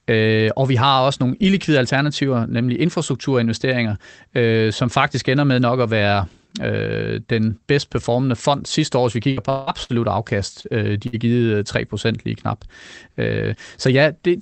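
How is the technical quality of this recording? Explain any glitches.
The recording has three network glitches packed into the last five seconds, all on a speech signal carried over a call path whose sound points to Opus at around 24 kbps, with nothing above roughly 8 kHz.

From 9.31 to 9.92 s, just after "sidste år hvis vi", there is repeated packet loss with a robotic sound. Packets went missing or arrived late four times in quick succession, the longest gap being 171 ms. Each time, the receiver filled the hole by extending the last sound, about 276 ms of invented audio in total, and roughly 180 ms of real speech never came back. With about 45% of that stretch synthesised, the speech turns choppy and robotic.

From 10.61 to 10.67 s there is a short stall from a late packet. One packet missed its playout time and the jitter buffer ran dry, so the receiver held the current sound for about 28 ms until the packet arrived, then carried on from the same point. 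Nothing is lost, but the sound is briefly drawn out, with a faint buzz or dip.

From 11.07 to 11.16 s there is a burst of packet loss. A run of audio about 60 ms long never arrived in time. The receiver bridged it with about 57 ms of continued, fading sound, so a held buzz or trailing hiss replaces the missing speech. The audio then jumps ahead, with that fragment gone.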